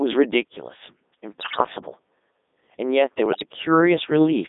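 The whole recording passes through the Codec 2 vocoder, which sends only pitch, voicing, energy and a spectral outline and then rebuilds the speech from sine waves, so the original waveform never arrives. The result sounds buzzy and robotic throughout, with heavy codec damage and a narrow band of roughly 250 Hz to 3.7 kHz, which fits the codec's 3.2 kbit/s mode.

From 1.40 to 1.66 s, bit errors on the digital voice radio corrupt the vocoder's frame parameters at a rate of roughly one bit in ten. Because each flipped bit alters the pitch, level or spectrum of an entire frame, the synthetic speech lurches between pitches and loudness and breaks into warbling, robotic gibberish. A second burst of bit errors follows from 3.26 to 3.46 s, at roughly half that error rate, and produces the same bleeping, shifting garble, but milder.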